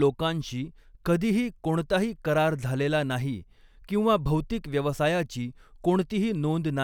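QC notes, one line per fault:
No faults heard.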